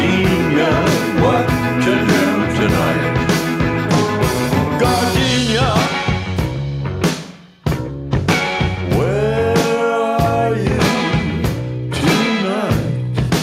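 No technical faults can be heard anywhere in this audio. There is nothing in it that calls for a time, a value or a cause to be pointed out.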